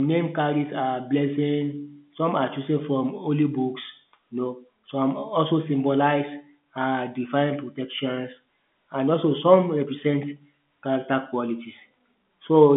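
No technical faults can be heard in this speech; the telephone-band sound, confined to roughly 150 Hz to 3.5 kHz with nothing above about 3.7 kHz, is what normal G.711 A-law line coding at 64 kbps would produce.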